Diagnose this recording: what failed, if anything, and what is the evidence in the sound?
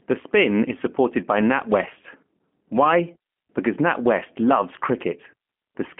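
G.729 codec damage throughout, at the codec stage: speech confined to 200 Hz to 3.4 kHz, rough and synthetic, fitting an 8 kbit/s pulse-excited vocal-tract model.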